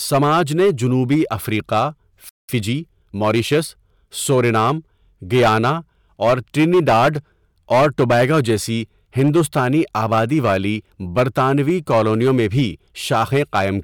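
Speech runs through hard clipping from start to finish. It is driven about 10 dB past full scale, so a few percent of samples hit the ceiling and the peaks are sliced flat. This gives a harsh fuzz on loud syllables. The waveform shows squared-off tops, and the spectrogram shows harmonic smear reaching high up. After "نے جنوبی افریقہ" a playback stall silences the output from 2.29 to 2.49 s, about 196 ms. It shows as a blank gap in both views and is likely caused by the player running dry or its thread being blocked. From 2.49 to 3.79 s, time-compressed catch-up hurries the audio at 1.15x without any pitch change, until "سورینام گیانا اور ٹرینیڈاڈ". On the spectrogram, harmonic lines keep their height while syllables crowd closer together, and small splice seams mark the cross-fades.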